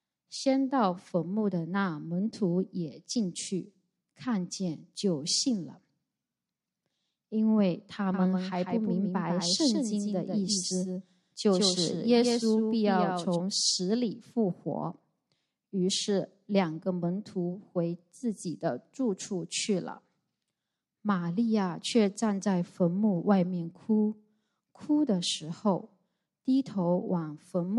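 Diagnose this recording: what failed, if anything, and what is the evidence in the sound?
A doubled audio track runs from 8.14 s to 13.36 s: a second full-band copy trails the original by roughly 150 ms, about 5 dB quieter, with no decay or room colour, and cuts in and out abruptly. Likely cause: a slower duplicate capture path mixed in alongside the main one.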